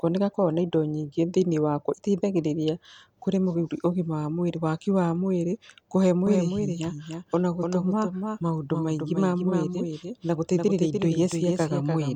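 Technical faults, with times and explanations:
6.27–12.16 s, doubled audio track: right after "waki wa mwĩrĩ kũhe" a second full-band copy of the speech cuts in abruptly, about 5 dB down and roughly 300 ms late, with no room colour, running to the end, likely from a slower second capture path.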